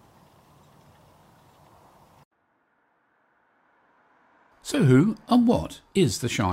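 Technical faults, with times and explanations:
No technical faults can be heard in this clip.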